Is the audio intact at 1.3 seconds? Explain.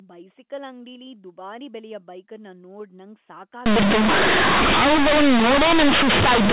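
Yes, the speech is intact at 1.3 seconds, with nothing breaking into it beyond the narrow telephone band of the A-law G.711 coding, which carries nothing above 4 kHz.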